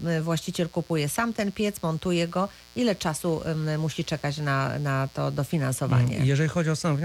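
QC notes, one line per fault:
Throughout: mains buzz, a steady, raspy buzz sitting under the speech at about 25 dB below it. It comes from sharp switching spikes entering the signal twice per 60 Hz cycle, so harmonics of 60 Hz stack up into the kilohertz range.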